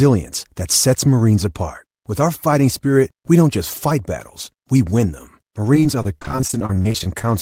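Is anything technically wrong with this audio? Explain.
Yes. From 5.74 to 7.28 s there is repeated packet loss, heard as robotic sound: 28 short gaps, the longest 33 ms, each patched by stretching the previous sound. Unlike a single dropout, the holes recur rapidly, so about 30% of the stretch turns choppy.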